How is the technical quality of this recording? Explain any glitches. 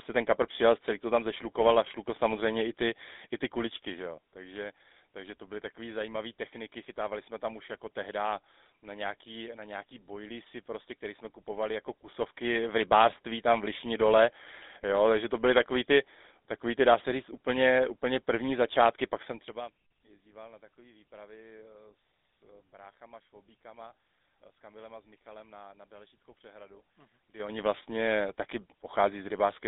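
Technical quality is limited by a narrowband phone codec across the whole clip. There is one brief level glitch near the end.

The GSM full-rate codec is heard from start to finish. The speech sits in a narrow line band of roughly 250 Hz to 3.7 kHz. Nothing comes through above 3.8 kHz. The codec rebuilds the voice from a vocal-tract model fed by a coarse, regularly spaced pulse excitation. That thinned excitation gives a plainly audible buzzy, gravelly roughness. The sound fits a 13 kbps GSM full-rate stream.

Zipper noise appears from 27.21 to 27.59 s, just before "vlastně taky". The level changes by about 25 dB. It moves in 6 dB jumps at around ten steps a second, with no smoothing between them. Each jump leaves a small click. Together the clicks form a short ticking zip over the speech.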